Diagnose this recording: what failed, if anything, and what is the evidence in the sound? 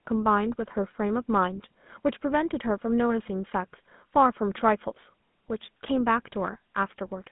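The codec stage failed. The whole clip carries a buzzy, gravelly roughness from the GSM full-rate codec, which fits its 13 kbps rate. The speech is squeezed into a band of about 150 Hz to 3.6 kHz. The codec rebuilds the voice from a vocal-tract model fed by sparse, regular pulses, which leaves that coarse texture.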